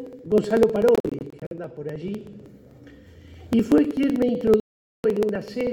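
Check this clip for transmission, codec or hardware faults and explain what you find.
Two faults are present: a regular ticking across the whole clip and two stretches where the sound drops out.

Periodic USB or driver dropouts run from 0.07 s to 5.67 s, recurring every 0.063 s. At each interval something stalls the audio path, and roughly a millisecond of audio is skipped rather than padded with silence. The result is a steady train of about a hundred small ticks, heard only while sound is playing.

Bluetooth dropouts occur from 0.95 s to 1.53 s and from 4.60 s to 5.06 s, most likely because packets reached the headphones too late and were discarded. In the first stretch, 209 ms goes missing in short bursts spread over about 0.56 s, the longest lasting 46.4 ms. In the second, 441 ms vanishes. Each time, the sound cuts out and resumes further along, as though it had kept playing.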